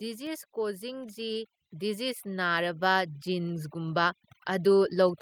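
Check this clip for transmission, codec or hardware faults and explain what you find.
Two processing faults are present in this speech clip.

Overdone noise removal runs throughout. The suppressor is set too aggressively, so frequency bands close to its noise estimate are pulled far down or removed, taking quieter speech detail with them. The background drops and breaks up into twinkling specks.

Automatic gain rising begins at about 0.53 s and continues to the end. The gain control judges the input too quiet and lifts its gain gradually, so voice and background swell together over more than a second rather than stepping up at once.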